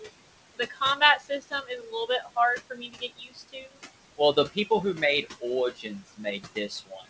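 A speech clip where the room noise, sitting about 13 dB below the voice, pumps in and out. It drops by roughly 19 dB in the gaps and surges back under each phrase. These are noise suppressor artifacts. The suppressor judges each frequency band frame by frame and pulls down whatever it reads as steady noise, so its gain keeps shifting with the speech. The same process also causes speech cut by the noise suppressor. Parts of the voice turn faint and swallowed at 0.57–1.01 s, 1.18–2.37 s, 2.58–3.84 s, 4.17–4.71 s, 5.22–5.44 s and from 5.71 s to the end. The dips go as deep as about 16 to 20 dB. The third stretch loses around a second of speech in total, and the first, second, fourth and fifth lose a fraction of a second each. The suppressor mistook parts of the speech for background and lowered them along with it. The band stops at 8 kHz, which fits a G.722 call path at 64 kbps.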